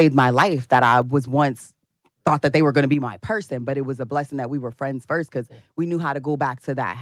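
From 0.0 to 0.43 s and from 0.72 to 0.98 s the loudest peaks are flattened and crackle harshly. This is likely microphone overload, with the input driven about 6 dB and then about 4 dB past the converter's limit.

At 1.02 s, just before "was once thought that", and at 2.94 s, before "my person but it", voice and background drop abruptly by about 4 dB and about 5 dB. The likely cause is the microphone volume being stepped down by the call software.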